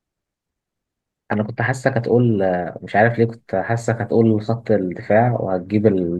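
Speech, with a single loud pop at 1.33 to 1.35 s, lasting about 20 ms and peaking a few dB above the level of the speech around it. The speech carries straight on underneath, so nothing is lost; it's just a sharp click sitting on top. That shape is the signature of a quick voltage spike added to the signal, likely from a plug being nudged, a switch, a static discharge or a brief driver glitch somewhere in the chain.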